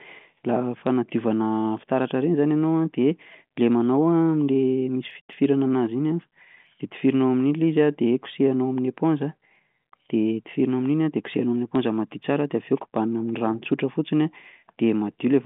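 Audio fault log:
0.21–15.34 s, clock slip clicks: Two unsynchronised clocks, likely about 100 ppm apart, make a single sample drop or repeat each time the drift reaches a whole sample, roughly every fifth of a second. The result is a steady train of faint ticks, around seventy in all, clearest on louder, sustained speech and absent in pauses, sitting on top of narrowband telephone audio that stops near 3.8 kHz.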